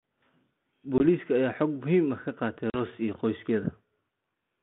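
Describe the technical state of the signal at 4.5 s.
At 4.5 s the speech is intact, with no fault present at that moment.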